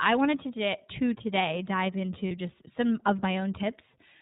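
Speech was encoded with the iLBC codec, in a way that fits its 30 ms frame mode at about 13 kbps. Nothing above 4 kHz survives, and the voice sounds plainly rough and synthetic. From 2.28 to 2.31 s, between "to to today dive" and "just some of", lost iLBC frames (consistent with one missing 30 ms frame) were concealed by repeating the last pitch cycle mixed with noise. This leaves a brief buzzy, held vowel, and the voice recovers immediately afterwards.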